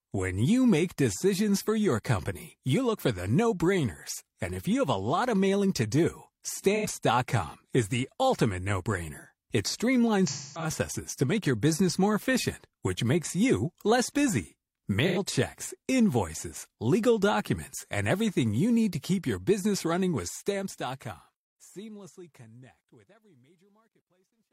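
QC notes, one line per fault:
6.75–6.86 s, 10.27–10.70 s, 15.07–15.18 s: AAC frame loss with concealment. The first gap follows "of mailing to do" and lasts about 85 ms, and the third is the same length. The decoder holds the last good spectrum with randomised phase, so each short gap is a brief smeared, noisy patch. The middle event is a broken run of about 300 ms ahead of "to make your business". That longer hold decays toward a very faint noise floor before the signal fades back in.
20.08–24.53 s: truncation distortion on a fade. After "to keep your business" the fade-out starts around 20 s and runs to 24.5 s. The fade stage has too few bits and adds no dither, which fits a 12-bit stage. As the level drops toward the smallest step, the waveform collapses into a few coarse steps. From 22.93 s to the end the tail turns gritty.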